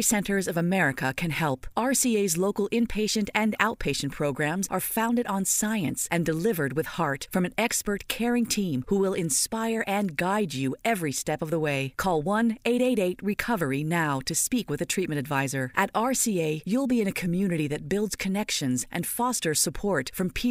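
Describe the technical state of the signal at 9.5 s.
At 9.5 s the speech signal is intact, with no audible dropout, distortion, or other fault at that moment.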